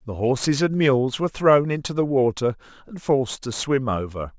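Throughout, the speech was downsampled without an anti-aliasing filter, consistent with 24 kHz to 16 kHz; content above 8 kHz folds back as gritty, metallic aliasing around 25 dB down.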